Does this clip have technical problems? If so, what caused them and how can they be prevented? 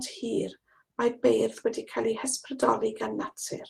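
Yes: a lost packet rebuilt from error correction at 0.47–0.49 s and 2.61–2.63 s. Each brief rough, noisy patch fits one lost 20 ms packet replayed from a low-bitrate copy, with no dropout or smeared repeat. Reducing network packet loss, through a steadier connection or traffic prioritisation, would prevent it.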